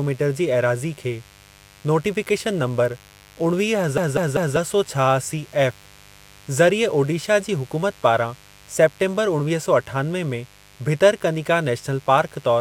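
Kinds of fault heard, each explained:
Mains buzz: Sharp switching spikes from the 50 Hz supply, as a dimmer, rectifier or unshielded lead would let in, are leaking into the signal path twice per mains cycle, so they recur 100 times a second. The spikes carry harmonics of 50 Hz up to several kHz. They add a steady, raspy buzz that sits under the speech for the whole clip, roughly 30 dB below it.
CD stuck on one turn: A scratch on the disc makes the player's laser jump back one track at the same point on every revolution, so playback keeps returning to the same spot. From about 3.98 to 4.56 s, a 196 ms stretch of speech plays three times in a row. Each jump back brings a brief mute, which gives the fast, evenly timed stutter of a skipping CD.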